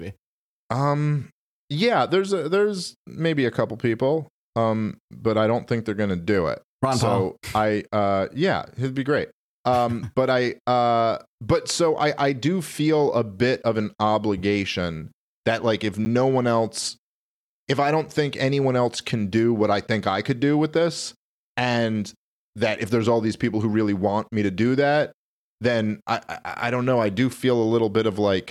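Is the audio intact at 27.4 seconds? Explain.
Yes, the speech plays through 27.4 seconds with no audible dropout, click, distortion or other technical fault at that moment.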